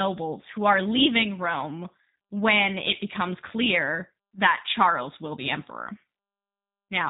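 From start to finish the speech has plainly audible G.729 codec damage: rough, synthetic rebuilt voice, nothing above 3.8 kHz, pointing to an 8 kbit/s VoIP link.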